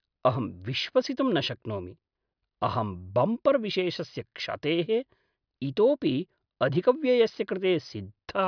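No technical faults can be heard anywhere in this speech recording. There is nothing to mark at any point in time.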